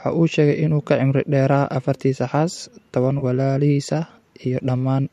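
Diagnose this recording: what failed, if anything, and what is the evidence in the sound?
AAC frame loss with concealment occurs at 3.19 to 3.24 s, between "afartiisa xaas tobaan" and "walaalihiis ah". The stage is the network feeding the codec. A short smeared, noisy patch interrupts the speech there. About 30 ms of audio went missing, which fits three lost frames of the roughly 10 ms kind used by AAC-ELD, the codec likely carrying this recording. The decoder bridged the gap by reusing the last good spectrum with randomised phase, so the loss was too brief to fade to silence.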